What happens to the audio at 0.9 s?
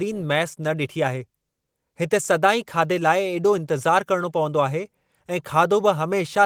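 Nothing goes wrong at 0.9 s: the speech there comes through intact, with no dropout, click, distortion or other fault at that moment.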